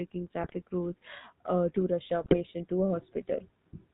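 Speech runs through the GSM full-rate codec for its whole length. The voice is buzzy and gravelly, and nothing above 4 kHz gets through. The damage is plainly audible. A coarse pulse-driven excitation and a vocal-tract model replace the real waveform, which fits the 13 kbps full-rate coder. GSM bit errors hit twice, from 0.41 to 0.55 s and from 2.23 to 2.37 s. Each burst lasts about 0.14 s and breaks into squawks and gargling. Corrupted filter, pitch and gain values distort each decoded frame. The span fits several consecutive 20 ms frames.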